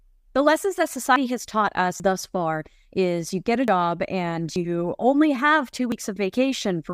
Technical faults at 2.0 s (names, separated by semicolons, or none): dropped buffer (overrun)